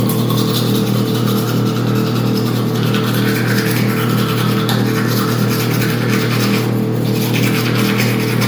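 From start to finish, the sounds carry a swirling, hollow smear, with transients blurred and soft, and nothing above 19.9 kHz. This is generation loss, likely from the audio being passed through a lossy MP3 codec around ten times, which fits a 128 kbit/s chain. A single encode at that rate would leave crisper attacks. Here each fresh pass quantised on a shifted frame grid, stacking noise and spectral holes into a phasey wash.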